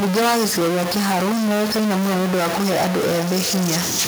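From the start, the speech carries distortion, and even the pauses hiss with noise instead of falling silent. The likely cause is a stuck bit in the converter, offsetting about half the samples by a fixed step. A waveform would look jagged, and a spectrogram would show broadband noise filling the gaps. From 2.15 s to the end, a feedback echo between two devices appears: the speech returns at intervals of roughly 0.4 s, peaking at about 13 dB below the original, each repeat thinner and more ringing. On a spectrogram this shows as fainter, evenly spaced copies of each word trailing behind it.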